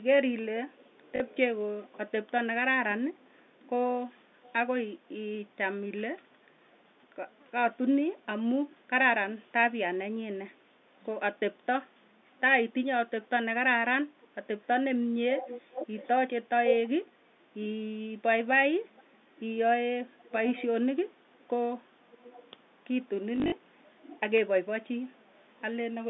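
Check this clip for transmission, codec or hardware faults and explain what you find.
Two faults run through the clip: a delayed echo of the speech across much of it, and two short bursts of packet loss concealed by repeating audio.

Echo leak: The likely cause is a far end on a loudspeaker whose echo canceller let part of the returning signal through and sent it back. A copy of the speech trails the original by about 0.45 s at 0.03–5.08 s, 6.7–6.82 s, 10.79–11.05 s, 12.07–17.91 s and 18.89–25.63 s. It is faint in most stretches. At 12.07–17.91 s it is strong, only about 10 dB below the speech.

Packet loss with last packet repeated: The network dropped packets, and the receiver filled each gap by replaying the last good one. At 1.16–1.2 s about 40 ms is lost, which fits two 20 ms packets. At 23.36–23.52 s about 100 ms is lost, scattered over 160 ms, with the longest run 40 ms. Because the replays repeat in runs, each burst produces a brief robotic stutter, buzzing at about 50 Hz.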